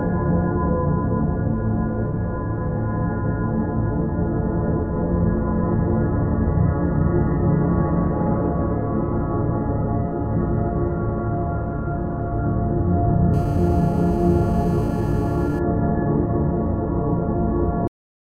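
From 13.34 to 15.59 s a GSM phone buzz sits under the sound: a nearby 2G handset on a call pulses about 217 times a second, and the audio circuitry rectifies those bursts into a steady, raspy buzz about 24 dB below the signal. A spectrogram shows a stack of evenly spaced horizontal lines at 217 Hz and its harmonics.

At 17.88 s the audio has a cut-off end. The final buffers never reached the output, so it stops mid-sound and falls straight to digital silence with no decay. The waveform ends abruptly in a flat line, and the spectrogram goes blank at a sharp vertical edge.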